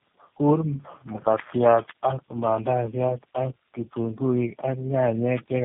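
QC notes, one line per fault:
Throughout: tandem speech coding. The speech passes through GSM full rate, AMR-NB at 6.7 kbit/s and finally G.729A at 8 kbit/s, with G.711 links between. Each low-rate coder re-encodes the previous one's errors, so the result is rough, muffled and warbly, with nothing above 3.6 kHz.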